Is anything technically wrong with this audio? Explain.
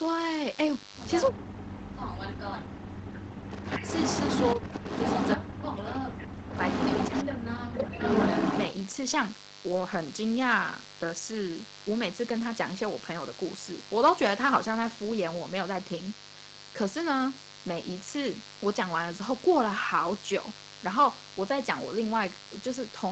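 Yes, there are three problems here, and they bunch together in the first eight or nine seconds apart from the buzz.

Mains buzz runs through the whole clip, at about 20 dB below the speech and built on 50 Hz. Sharp switching spikes from a dimmer, rectifier or unshielded run land twice per cycle, stacking harmonics up into the kilohertz range, so you get a steady raspy buzz under everything.

Speech suppressed in double talk shows up at 1.29–3.88 s (about 2 s affected), 4.55–4.84 s (briefly), 5.37–6.54 s (about 1 s) and 7.11–8.02 s (about 0.7 s). The speech drops by up to about 40 dB, though the 4.55 s dip is only about 10 dB. The likely cause is an echo canceller that couldn't tell its own talker from loudspeaker echo and turned both down.

Echo leak appears at 3.51–5.36 s, 6.55–7.24 s and 8.00–8.73 s. A delayed copy of the voice comes back after 336, 349 and 357 ms, about as loud as the original speech. 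That's likely one side's echo canceller missing part of what its microphone picked up from the loudspeaker and sending it back.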